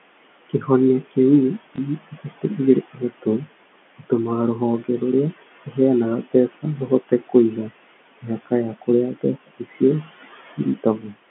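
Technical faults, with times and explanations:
Throughout: noise suppressor artifacts. The suppressor pulls the steady room noise down by about 17 dB between phrases and lets it swell back under the speech, so the leftover noise pumps from frame to frame.
1.76 to 1.78 s: packet loss with last packet repeated. One 20 ms packet went missing and the previous one was played again in its place, which sounds like a small blip.
9.4 to 9.81 s: speech cut by the noise suppressor. The suppressor mistook some quieter bits of speech for background and turned them down with it, by about 19 dB at the deepest. Around 150 ms in total sounds swallowed or faint.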